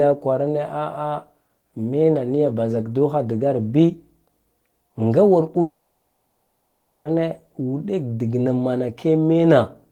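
From 5.61 to 7.07 s, a likely long network dropout: the last sound decays as a brief buzz, then 1.27 s of silence. Speech resumes with 1.44 s lost.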